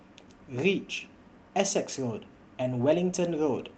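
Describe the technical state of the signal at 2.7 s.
From 2.73 to 2.83 s the sound turns briefly rougher and noisier, with no gap: a lost packet rebuilt from error correction, about 60 ms consistent with three packets, replayed from low-bitrate Opus copies.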